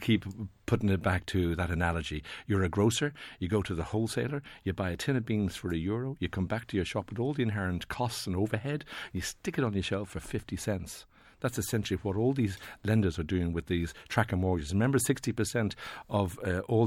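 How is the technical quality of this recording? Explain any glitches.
Nothing in the speech recording stands out as a glitch; I couldn't pick out a single technical hiccup anywhere in it.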